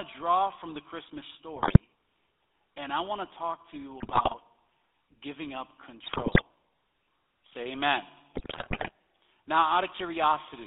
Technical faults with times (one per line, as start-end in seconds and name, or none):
0.00-10.67 GSM full-rate codec
1.56-1.78 GSM bit errors
4.00-4.34 GSM bit errors
6.06-6.43 GSM bit errors
8.34-8.91 GSM bit errors